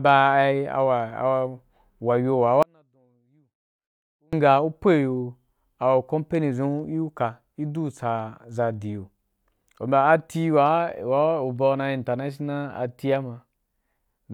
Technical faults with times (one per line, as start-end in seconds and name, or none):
1.10 corrupt FLAC frame
2.63-4.33 audio dropout to a faint residue